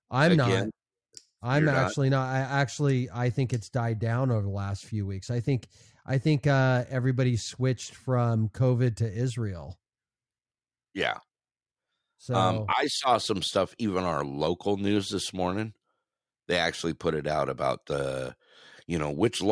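No technical faults can be heard anywhere here.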